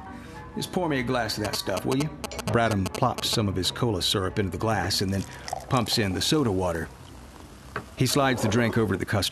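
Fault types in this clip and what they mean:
GSM signalling bursts: A nearby 2G phone exchanging brief signalling bursts with its network had its radio energy rectified by the audio circuitry. From 1.45 to 3.35 s this produces a galloping pattern of short 217 Hz buzzes, roughly as loud as the sound itself.
Frames out of order: Two neighbouring runs of coded audio were decoded in swapped order, so a short stretch from 7.45 to 7.56 s plays with its halves exchanged. Each swapped block lasts about 52 ms, which fits two frames per block, and the result is a garbled flutter but no lost time.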